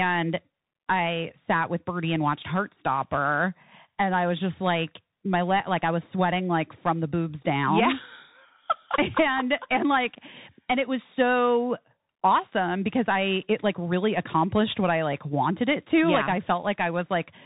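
From start to finish the speech passes through a Bluetooth CVSD headset codec. The encoder sends a single up-or-down bit per sample, consistent with a 64 kbps link, and its adaptive step lags behind fast, loud movements, so sibilants come out scratchy and a granular hiss sits beneath everything. A spectrogram shows a hard ceiling near 3.8 kHz with nothing above it, while the waveform's steep edges look flattened into slope-limited ramps.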